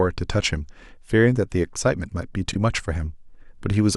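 Frames out of order, 2.51 to 2.56 s: two adjacent short blocks of the speech, each about 20 ms long and consistent with single 20 ms codec frames, were received swapped and decoded in that swapped order. The second block plays before the first, so this brief stretch comes out as a garbled flutter. Nothing is dropped, so the timing after the swap stays intact.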